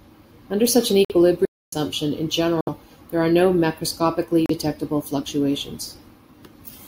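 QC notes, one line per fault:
1.05–1.12 s, 2.61–2.69 s, 4.46–4.51 s: Bluetooth stall. Silences of 53, 62 and 35 ms cut the speech, the first after "such an", the second before "there are no". Likely delayed packets emptied the headphone buffer.
1.45–1.73 s: playback stall. After "such an" the speech stops dead for about 270 ms, then carries on. The player likely ran out of data briefly.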